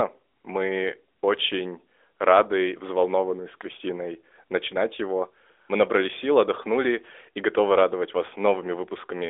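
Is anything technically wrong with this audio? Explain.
No, nothing in this speech stood out as a technical problem on listening.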